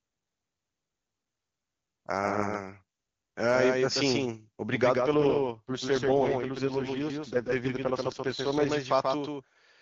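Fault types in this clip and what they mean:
Doubled audio track: a second full-band copy of the speech trails the original by roughly 150 ms at about 5 dB lower, with no decay or room colour, likely from the signal being captured twice through a slower path or two misaligned copies in an edit.
AMR rate drop: from 4.98 to 8.70 s the AMR-WB link falls from 23.85 to 6.6 kbit/s as bits shift to error protection, so the speech turns rough and synthetic without any gap or narrowing of the band.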